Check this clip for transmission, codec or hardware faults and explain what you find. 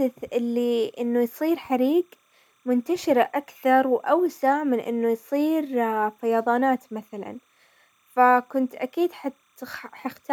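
One hardware fault is present: timecode bleed, running throughout the speech. Linear timecode from a nearby track or cable is leaking into the audio. The code is a square wave that flips between two pitches near 1 and 2 kHz, at a rate that fits 30 frames per second. It sits faint, roughly 45 dB below the speech, as a steady chirping warble underneath.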